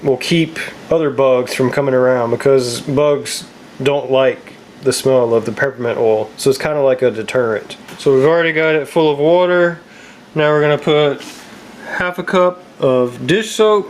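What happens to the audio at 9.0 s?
At 9.0 s the clip is in the grip of gain pumping, which runs through the whole recording. The gain ducks around 10 dB under each loud sound, most likely because excess input gain is feeding a fast limiter. On a waveform, the peaks look flattened and the quiet stretches look inflated. On a spectrogram, the noise floor brightens and dims in step with each loud burst.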